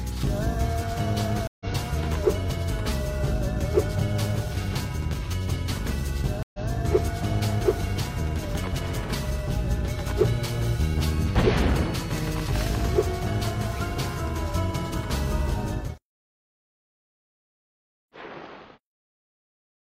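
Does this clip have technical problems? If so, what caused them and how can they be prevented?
Yes, there are two stream reconnects. At 1.47 to 1.66 s the audio drops out for 133 ms and picks up roughly 150 ms later. At 6.43 to 6.67 s there's a 114 ms gap, then it repeats 128 ms. Each time the connection dropped and a fresh decoder restarted mid-stream. A steadier connection and a larger reconnect buffer would prevent this.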